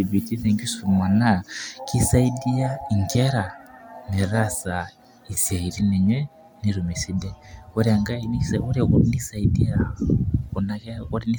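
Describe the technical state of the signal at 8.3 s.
At 8.3 s the speech signal is intact, with no dropout, clipping, distortion or other fault to be heard at that moment.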